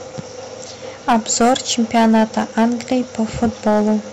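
Speech, with hard clipping throughout. The level is pushed about 10 dB past what a stage can pass, so peaks are cut flat. A few percent of samples hit the ceiling. The flattened tops add high harmonics, heard as crackle and harsh fuzz on louder syllables.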